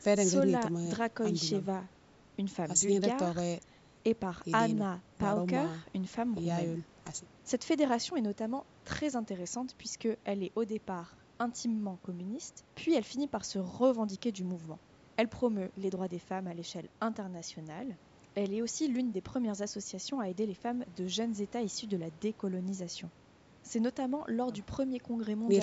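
No technical faults are audible.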